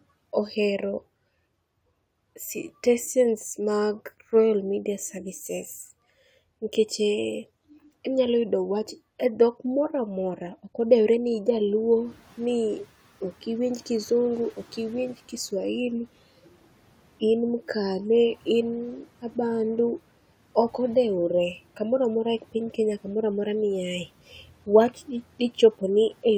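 Around 12 s the room noise jumps by about 17 dB, and from 11.75 to 13.02 s the noise suppressor is catching up: its estimate lags, so the noise leaks through before sinking about 9 dB.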